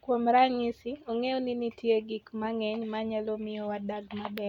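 No technical faults can be heard anywhere in the speech. Nothing in the sound points to a problem in how it was captured, processed or delivered.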